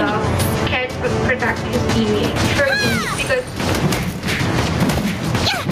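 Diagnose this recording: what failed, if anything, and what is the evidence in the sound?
Gain pumping throughout: the gain swings by around 15 dB under loud sounds, likely a fast limiter in the input processing clamping excessive microphone gain.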